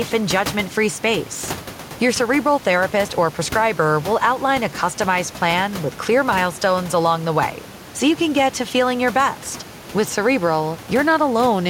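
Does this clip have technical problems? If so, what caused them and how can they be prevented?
No, there are no technical problems to prevent here.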